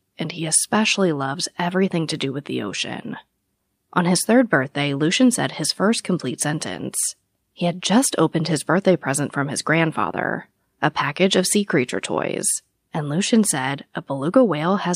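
Nothing in this speech recording stands out as a technical fault, so there's nothing here to flag.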